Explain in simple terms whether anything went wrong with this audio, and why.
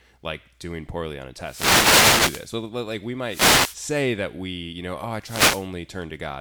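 Short bursts of hissy static swish over the speech from 1.4 to 2.54 s, 3.25 to 3.8 s and 5.2 to 5.7 s. These are wireless microphone noise hits: the microphone's radio signal briefly faded, so the receiver's own noise rose and covered the voice.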